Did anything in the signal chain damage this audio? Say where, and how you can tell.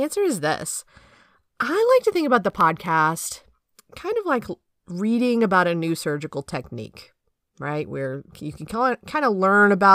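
Yes, at the driver or buffer stage: processor overload crackle from 2.46 to 2.88 s, after "to think about". About ten sub-millisecond buffers went silent, spread across that stretch, making gritty tearing rather than one clean dropout.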